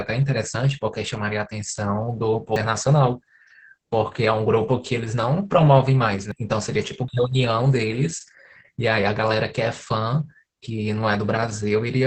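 Speech throughout, sounding muffled, hoarse and a little robotic, with nothing above about 8 kHz. This is Opus voice compression at a low 10 kbps in its SILK mode. The linear-prediction coder keeps a wideband signal but has too few bits to describe the excitation finely, so the voice takes on a buzzy, synthetic edge. The damage is heavy and constant. At 2.56 s, 6.32 s and 7.08 s there are abrupt jumps where the speech skips forward with no gap of silence. Around 150 ms is missing at each of the first two points and around 100 ms at the third. These skips are likely dropped buffers from an overrun: the incoming audio was overwritten before it could be read, and the audio on either side of the loss was joined directly.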